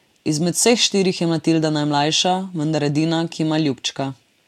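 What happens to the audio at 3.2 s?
Nothing goes wrong at 3.2 s: the speech carries on intact through that moment, with no dropout, click or other fault to be heard.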